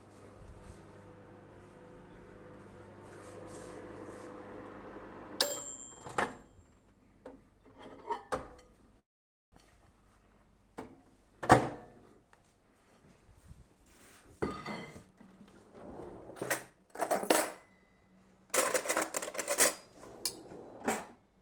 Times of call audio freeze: 8.99-9.54

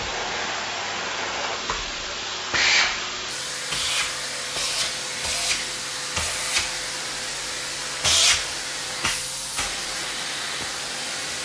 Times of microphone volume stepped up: none

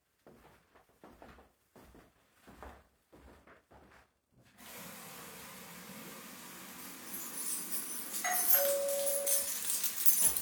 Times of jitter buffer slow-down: none

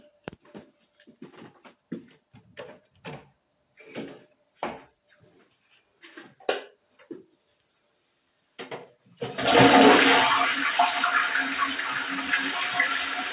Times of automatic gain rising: none

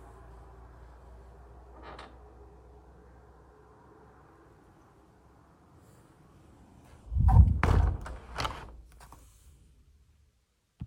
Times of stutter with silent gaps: none

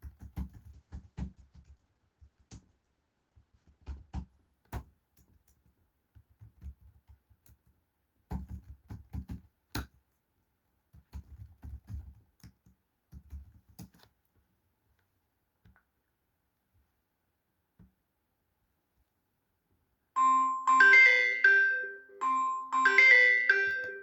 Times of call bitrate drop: 0.71-6.87

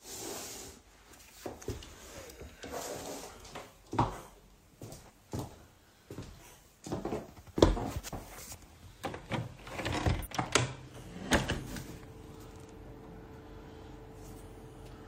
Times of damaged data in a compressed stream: 5.06-5.11, 8.09-8.13, 10.22-10.27

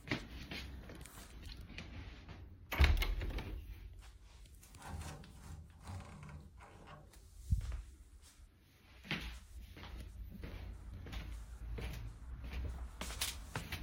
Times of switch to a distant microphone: none

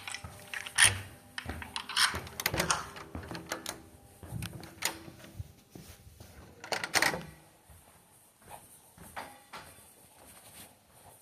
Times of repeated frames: none

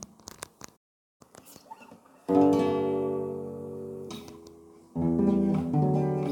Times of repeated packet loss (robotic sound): none

